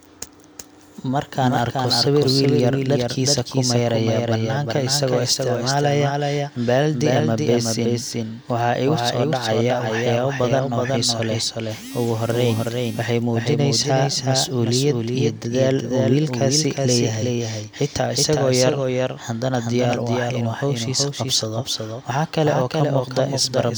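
It's a speech recording with a doubled audio track running the whole way through: a second, somewhat quieter full-band copy trails the original by around 400 ms, with no reverb tail or room colour to it. That's likely the same signal captured twice through a slower second path.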